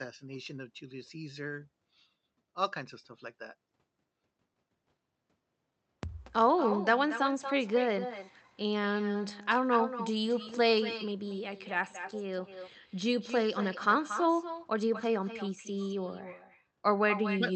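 A speech recording carried over a call path with echo with no canceller: the far end plays the audio through a loudspeaker, its microphone picks it up again, and nothing strips that return before it comes back. Throughout the clip, every phrase is trailed by a weaker copy, about 10 dB down and arriving roughly a fifth of a second later, sounding thinner, over a codec band that tops out near 8 kHz.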